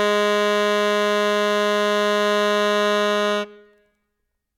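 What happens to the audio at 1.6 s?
Nothing goes wrong at 1.6 s; the music plays through that moment intact, with no dropout, click or other fault.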